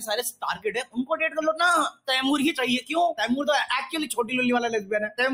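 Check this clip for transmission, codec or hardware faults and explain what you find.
A speech-tuned noise suppressor has been left running on this sound. That is a processing fault, not transmission or codec damage.

Noise suppressor applied to music or sounds, throughout: the suppressor treats steady, sustained content as noise and turns it down, so the level swings by roughly 10 dB. Onsets get through while held portions and tails sink, which makes the sound pump and thin out. On a waveform the envelope dips soon after each attack, and on a spectrogram the decays look clipped short.

Sound cut by the noise suppressor, at 0.32 to 1.15 s, 1.91 to 2.09 s and 4.09 to 4.32 s: in these stretches the suppressor cut the sound harder than elsewhere, by up to about 18 dB in the first two and about 8 dB in the third. The sustained material audibly drops away, showing as dark gaps across the spectrogram and sunken stretches in the waveform.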